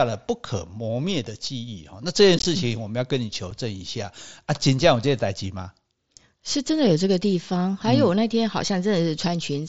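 A brief chopped, crackly stutter with abrupt edges appears from 2.39 to 2.45 s, and a single tiny hole at 3.51 s. This is unconcealed Bluetooth headset packet loss: on the wideband mSBC link, headset voice packets went missing and silence or an idle pattern filled the gaps.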